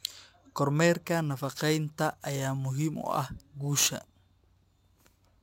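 From 1.04 s to the end of the speech, sample clock jitter sets in. The converter's clock wanders by something like ten microseconds, so each sample lands slightly off its proper moment, and the resulting error sits only about 15 dB below the signal. It sounds like a gritty hiss riding on the voice, harshest on sibilants and loud, bright syllables. Unlike a steady noise floor, this roughness follows the waveform's slope and drops away in the pauses.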